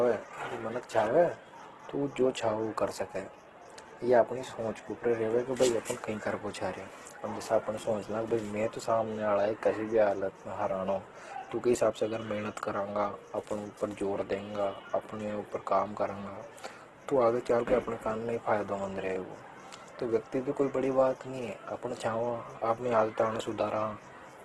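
Opus compression runs through the whole of this speech recording, and it sounds heavy. Nothing comes through above about 12.1 kHz, and the retained band has a rough, grainy texture, with tonal parts of the sound turned noisy. That points to the likely cause being Opus in its CELT music mode at a very low bitrate, around 12 kbps, where the encoder preserves each band's energy but fills starved bands with folded or noise-like content.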